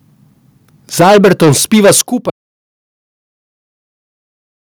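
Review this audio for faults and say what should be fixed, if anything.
From 1.0 s to 2.01 s the speech shows microphone overload. Peaks run about 12 dB past full scale, and roughly a fifth of the samples in that stretch are flattened at the ceiling, giving loud syllables a harsh, crackling edge. The likely cause is an input volume set too high, so the converter runs out of range and squares off the waveform tops. Prevention: set the microphone input so the loudest speech peaks well below full scale, leaving headroom.

The microphone volume is stepped down twice. At 1.01 s the level falls by about 3 dB, just after the clipping begins. At 2.01 s it falls again by about 11 dB, right where the overload ends. Speech and background drop together in a single step each time. This is likely automatic gain control in the call software reacting to the distorted peaks by cutting the device's input volume. 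Prevention: set a correct input level before recording so the software has no reason to intervene, or disable automatic microphone adjustment.

At 2.3 s there is an audio dropout to silence, and it lasts to the end of the clip. The sound stops mid-flow and is replaced by silence, with no room tone or noise floor underneath. That points to the input signal being lost while the recorder kept writing silence, likely from a disconnected device, a failed link or an unintended mute. Everything after 2.3 s is missing. Prevention: secure the connection, watch the input meter during recording, and check mute states before starting.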